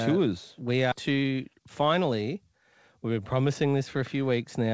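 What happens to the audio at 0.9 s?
A skip ahead occurs at 0.92 to 0.94 s. Roughly 0.7 s of audio was thrown away, most likely because the jitter buffer overflowed while later packets were already queued. Playback then jumps straight to the newer material with no silence or fill between the two sides. To the ear, the sound lurches forward abruptly, and the portion that should have bridged the jump is simply absent.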